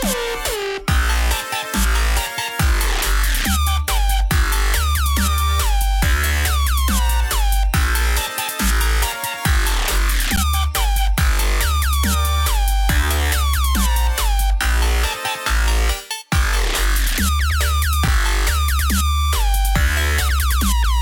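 At 10.36 s and 18.08 s, underruns with held sample flatten the waveform for 11.6 ms and 5.8 ms, fitting 512- and 256-sample buffers; playback resumes softly without lost audio.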